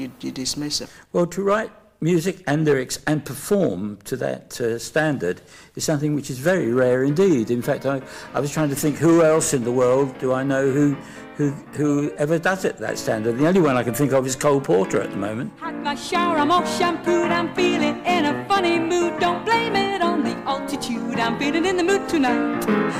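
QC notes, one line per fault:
Throughout, hard clipping. The signal is driven about 7 dB past what a stage in the chain can pass, so the loudest peaks are sliced flat. Around two percent of the audio hits that ceiling. The flattened tops add high harmonics, heard as crackle on peaks.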